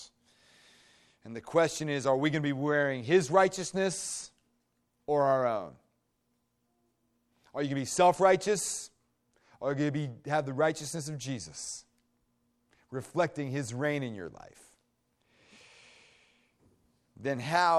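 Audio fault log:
No technical faults are present in this speech recording; the signal stays stable and continuous throughout.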